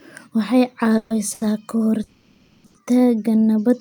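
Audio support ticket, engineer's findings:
Call audio freeze, 0.97–1.12 s and 2.03–2.66 s: last sound continued as a fading buzz, no silence. Likely delayed packets draining the jitter buffer. Playback resumes where it stopped, adding about 130 ms and 610 ms of delay.

Short stall from a late packet, 1.34–1.43 s and 2.66–2.76 s: a sound held too long with a slight buzz. The jitter buffer ran empty, so the receiver stretched the sound for 70 ms and 80 ms. Nothing missing.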